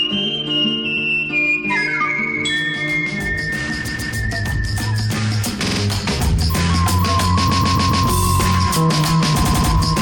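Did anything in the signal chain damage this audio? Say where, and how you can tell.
Yes: repeated frames at the codec or storage stage. The music stutters at 0.96, 3.87, 5.65, 7.49 and 9.42 s as compressed blocks of 46 to 139 ms replay.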